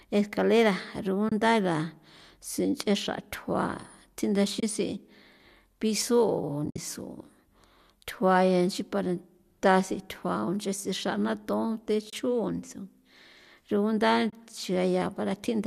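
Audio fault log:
1.29, 4.60, 12.10 and 14.30 s: AAC frame loss with muting. Each is a roughly 30 ms soft-edged dropout, which fits three missing 10 ms frames zeroed by the decoder. The overlapping windows fade the sound out and back in.
6.66 to 6.78 s: AAC frame loss with muting, a longer patch where about 90 ms goes missing over 120 ms, with the longest silent run around 70 ms, so it reads as a stuttering hole rather than one clean gap.
throughout: low-delay AAC compression. The short-frame coding sounds lightly coloured, likely from low-delay AAC-ELD at 64 kbps.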